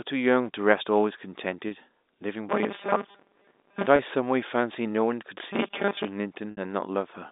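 Speech heard over a G.711 A-law telephone line, band-limited to roughly 250 Hz to 3.7 kHz. Packet loss with pitch repetition occurs three times. A single 30 ms loss falls at 1.69 to 1.71 s, and another at 3.96 to 3.99 s. Each sounds like a briefly held, buzzy sustain as the last pitch period is looped to cover the gap. At 6.51 to 6.57 s a longer 60 ms loss, about two packets' worth, stretches that hold further before speech resumes. A robotic sound from repeated short buffers affects 2.49 to 3.86 s and 5.53 to 6.05 s. The voice turns into a rigid, metallic buzz locked at 200 Hz. That pitch fits a 5 ms chunk being replayed over and over. The likely cause is new audio arriving too rarely, so the player keeps repeating its last short buffer. In the first stretch about half the audio is replaced this way. In the second most of it is.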